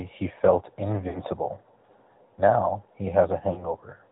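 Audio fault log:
Throughout: AMR narrowband mobile codec. The speech is squeezed into a narrow telephone band, with nothing above 4 kHz. The codec rebuilds the voice from a vocal tract model driven by a few pulses per short block, so it sounds synthetic and buzzy. The damage is plainly audible. The amount of coarseness fits a mid-rate mode of about 10 kbit/s.
1.08–1.22 s and 3.52–3.74 s: lost AMR speech frames. In each spot the decoder had no valid data, so it repeated the last good pitch and vocal tract settings at falling gain. The sound smears and dips instead of cutting off cleanly, then the voice returns briefly weak. The first gap fits about three lost 20 ms frames, roughly 60 ms. The second fits two, roughly 40 ms.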